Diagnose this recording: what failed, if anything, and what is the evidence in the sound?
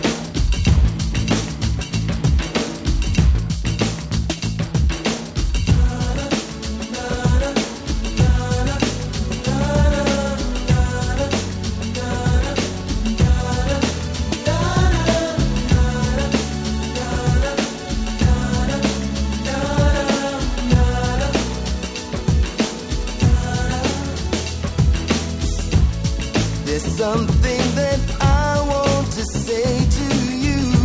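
Nothing failed anywhere along the chain here, and there's no dropout, distortion or glitch in the sound to point to as evidence.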